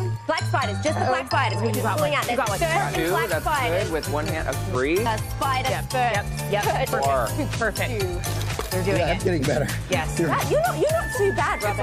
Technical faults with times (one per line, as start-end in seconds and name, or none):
0.00-11.82 filter restarted on every block
1.30 dropped buffer (overrun)
1.52 compressed frames skipped
2.95 compressed frames skipped
4.75 dropped buffer (overrun)
5.05 compressed frames skipped
6.93 dropped buffer (overrun)